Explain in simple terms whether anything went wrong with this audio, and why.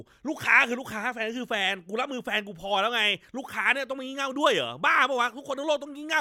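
Nothing went wrong with this audio, because none of the speech is cut off, garbled or interrupted.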